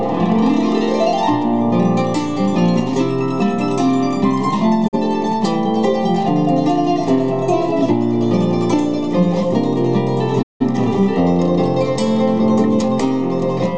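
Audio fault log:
4.87–4.98 s and 10.41–10.65 s, digital broadcast dropout: the receiver muted when frames failed, fading out over 20 ms into silent holes (the second fits four lost frames against one first). The sound resumes with audio skipped. On the waveform the trace flattens to near silence; the spectrogram shows blank vertical bands.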